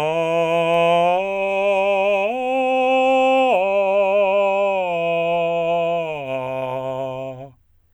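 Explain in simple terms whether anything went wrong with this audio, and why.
Bit error spikes at 0.74 s and again at 3.38 s: each is a single sharp tick cutting through the music. In both places one stored digital value had a single bit flip, so one sample, a tiny slice of the waveform, suddenly jumped far from where it should be and then snapped straight back. That lone jump is too brief to carry any pitch, so it sounds like a dry click unrelated to the music, with the first one a little louder.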